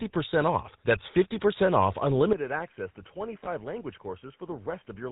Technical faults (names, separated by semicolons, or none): GSM full-rate codec; input switched to a poorer device; lost GSM frames